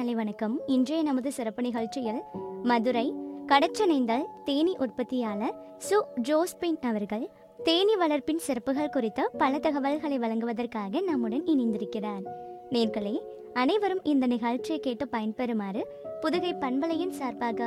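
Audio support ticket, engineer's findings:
Corrupt frame decoded at 10.57 s. Brief blip, quiet, peak about -45 dBFS. Probable component: decoder on the compressed stream path. Bit errors in a couple of frames went undetected, so the decoder played misread gains and codes, putting energy at the wrong frequencies for about the length of each damaged frame. Short and quiet.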